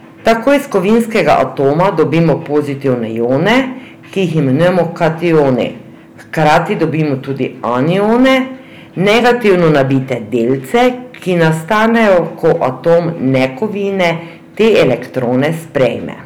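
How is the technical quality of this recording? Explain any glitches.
Technical quality is poor because of one persistent fault. Hard clipping runs from start to finish: the speech was driven about 14 dB past what the recording chain could pass, so every peak above that ceiling is sliced flat, with a few percent of all samples pinned at the limit. Those squared-off tops generate harmonics reaching high up the spectrum, and with overload this heavy the result is a harsh, buzzy fuzz on every loud syllable rather than occasional crackle.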